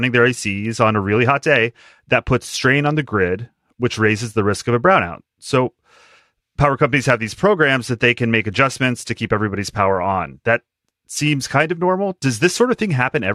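Nothing stood out on listening to this speech recording.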